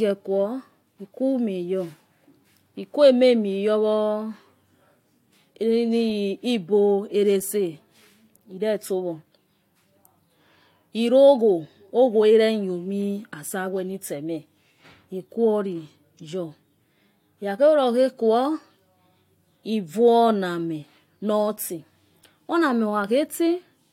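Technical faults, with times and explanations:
No technical faults can be heard in this speech recording. There is nothing to time or explain.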